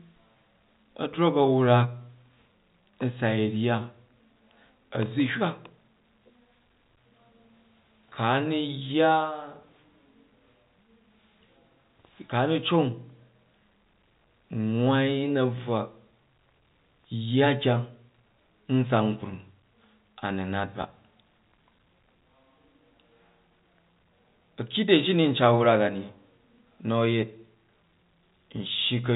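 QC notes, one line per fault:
Nothing to flag here: the speech comes across as ordinary G.711 telephone audio, with everything above about 3.8 kHz gone and only faint coding grain, as expected on a phone line.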